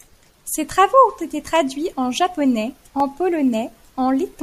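After "travaux ont été", CD scratch ticks: eight periodic clicks from 1.66 to 3.54 s, where unrecoverable disc errors are concealed, showing as thin vertical spectrogram lines and millisecond-scale waveform notches.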